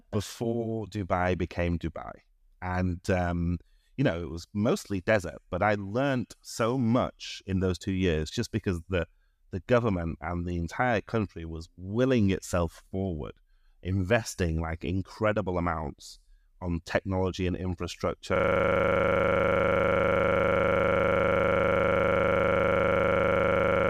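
A system hang loop begins at 18.36 s and runs to the end: the machine stalled while the audio hardware kept replaying the same 40 ms stretch of its ring buffer, well over a hundred times, giving a machine-gun stutter at 25 Hz in place of speech.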